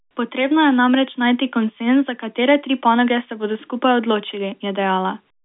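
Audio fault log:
No fault is found in the audio.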